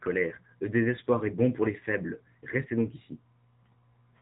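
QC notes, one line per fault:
throughout: AMR narrowband mobile codec. The speech has nothing above 3.8 kHz and carries plainly audible buzzy, synthetic coloring. A vocal tract model is driven by a few excitation pulses per short subframe, so fine detail is replaced by a resynthesized approximation. That level of damage fits a low rate of about 7.4 kbps. Unlike a plain low-pass filter, which only dulls the top end, this adds the codec's artificial, reconstructed quality to the sound itself.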